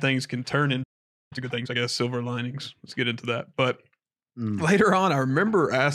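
At 0.83 s the speech stops dead in mid-flow. Silence follows for about half a second, until 1.33 s. This is a playback stall. The player most likely ran short of incoming data, or its output thread was held up, so nothing reached the speaker for roughly 0.48 s. When sound returns, it picks up from where it broke off. No speech is lost across the gap.

From 1.33 s to 1.79 s comes a time-compressed catch-up. The player is working off the backlog left by the stall. It drops small slices of the signal and cross-fades the joins. The passage runs at twice normal speed, yet the pitch stays put. The result sounds rushed. After 1.79 s the pace returns to normal.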